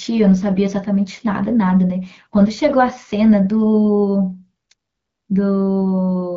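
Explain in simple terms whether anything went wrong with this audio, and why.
Nothing went wrong with this speech recording. It has the sound of an HD Voice phone call, where the wideband codec keeps the speech clear and leaves only a light trace of its coding.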